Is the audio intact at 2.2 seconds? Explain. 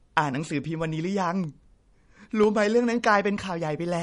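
No. The speech shows MP3 compression. Nothing sounds above 10.6 kHz, and sparse frequency lines swirl, which likely points to a bitrate around 40 kbps. Periodic USB or driver dropouts also run from 1.44 to 3.93 s. Every 0.5 s, a fraction of a millisecond of sound is replaced by silence. This gives regular ticks around 2.2 s.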